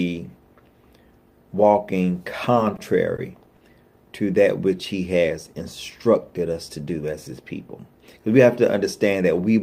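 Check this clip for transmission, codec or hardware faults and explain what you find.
Three short stalls from a late packet occur, one after another. Each time a packet missed its playout deadline, the jitter buffer ran dry, and the receiver held the last sound until the packet turned up, then resumed where it left off. Nothing is lost, but playback slips later each time. At 2.76 to 2.80 s and at 3.16 to 3.20 s, about 20 ms is stretched. At 3.56 to 3.62 s, about 40 ms is stretched. Each one sounds like a brief frozen hold with a faint buzz or dip.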